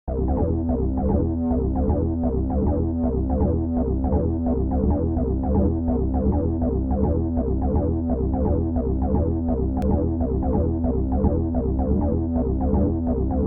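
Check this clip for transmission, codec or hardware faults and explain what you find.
One fault stands out: a block of digital silence at 9.82 s. Roughly 1 ms of samples drops abruptly to silence, likely from a late-filled output buffer, giving a tick that appears as a waveform notch and a thin vertical spectrogram line.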